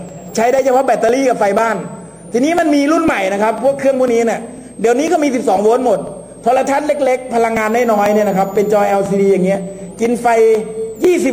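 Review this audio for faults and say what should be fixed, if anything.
A switching supply whistle runs throughout. It sits near 7 kHz, drifting between about 6.9 and 9.3 kHz, roughly 30 dB below the signal. Filter or replace the noisy power supply.

Periodic USB or driver dropouts tick every 0.498 s from 0.09 to 11.05 s. Each skips roughly 2 ms of audio. Stop the background task that blocks the bus.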